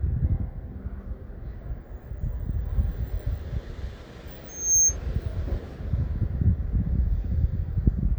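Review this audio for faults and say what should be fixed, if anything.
A loudspeaker feedback squeal runs from 4.48 to 4.97 s. A single 6.4 kHz tone swells over roughly a third of a second. It peaks about 10 dB above the sound. The microphone was hearing its own loudspeaker, and loop gain exceeded one there. To prevent it, lower the gain or notch 6.4 kHz.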